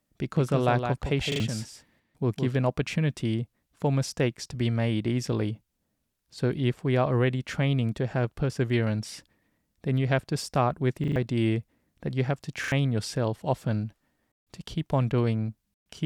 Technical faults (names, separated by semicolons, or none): doubled audio track; repeated buffer